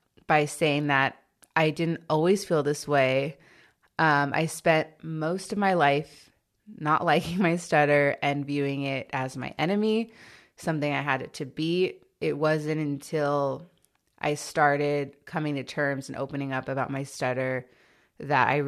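No technical faults can be heard in the recording.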